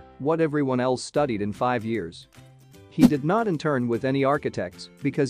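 No technical faults can be heard anywhere in the clip. The sound continues without any interruption or disturbance from its first moment to its last.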